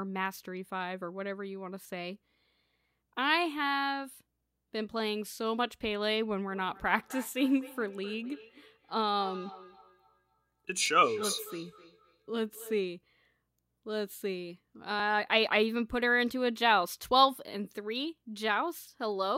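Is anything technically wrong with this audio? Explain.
Yes, there are two faults.

From 6.49 to 12.87 s there is feedback echo between two devices. One device replays the other's microphone, which picks it up again. Its echo canceller ignores that sound. Speech returns about every 300 ms, thinner and ringing, at about 16 dB below the speech.

From 15.0 to 18.99 s there are periodic USB or driver dropouts. A blocked bus or driver skips a few milliseconds of audio every 2.0 s. Nothing fills the gaps. There are about three of them, heard as brief ticks in the speech.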